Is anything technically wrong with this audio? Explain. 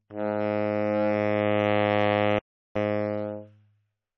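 Yes. From 2.39 to 2.76 s there's an audio dropout to silence: about 360 ms of dead silence, likely a lost input while recording continued, so the sound just vanishes.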